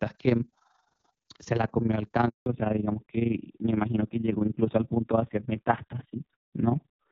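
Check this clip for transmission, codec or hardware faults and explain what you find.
Three faults are audible: a constant overlap-add ripple, a handover gap, and a fallback to narrowband after it.

Overlap-add ripple runs through the whole clip. Frames were rejoined with overlaps that don't sum evenly, so the level pulses by about 11 dB at around 20 Hz. This is heard as a robotic flutter and shows as regular comb-like bumps in the waveform envelope.

A handover gap occurs from 2.28 to 2.46 s. No frames arrived while the call switched networks, so the sound fades quickly into 180 ms of silence. This appears as a flat line in the waveform and a blank vertical strip on the spectrogram.

A fallback to narrowband follows from 2.46 s to the end. After the clear HD Voice wideband section, the call drops to a narrowband codec. Nothing remains above 4 kHz, so the sound turns duller and rougher, and the spectrogram's upper region goes abruptly empty.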